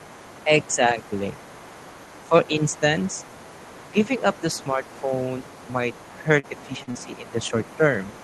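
From 0 s to the end, the other side's voice leaks through. It sits faintly underneath, roughly 25 dB below the main talker. Loudspeaker echo was likely not fully removed by the echo canceller.

Speech is suppressed in double talk at 0.45–0.97 s, 2.29–2.82 s, 3.86–5.11 s and 6.22–7.83 s. The canceller likely mistook the talker for echo and ducked both. The voice dips by about 10 dB, only about 5 dB in the third span. Short pieces of each span sound muffled or pulled back.

Inside the last span, three short concealed packet losses occur, at 6.39–6.46 s, 6.83–6.90 s and 6.91–6.98 s. Each time, 40 ms of audio never arrived. The receiver extended the preceding sound to fill it. Each gap is heard as a brief smear or wobble.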